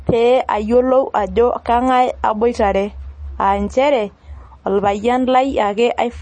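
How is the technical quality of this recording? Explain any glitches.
The recording has audible damage throughout from what is likely MP3 compression. The encoder appears to have been starved of bits, which fits a low bitrate around 32 kbps, so it dropped everything above 9 kHz and zeroed quieter frequency lines that then flicker on and off between frames. Across the whole speech clip this gives a dull top end, a watery, swirling texture, metallic chirps on s sounds, and softened, smeared consonant attacks.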